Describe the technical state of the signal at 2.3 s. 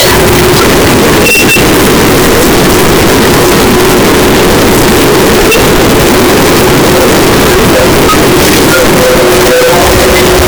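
Float read as integer at 2.3 s, as throughout: 32-bit float samples were likely read as 32-bit integers, giving a harsh, near-square waveform at an almost fixed, high level, with noise as loud as speech.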